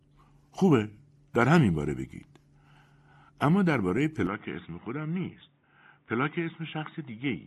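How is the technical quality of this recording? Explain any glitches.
The recording has one glitch. At 4.27 s, running to the end, the speech turns dull and boxy, with nothing above 3.8 kHz, about 5 dB quieter, and a new noise floor well below it. It's likely an input switched to a poorer device, with no gap at the switch.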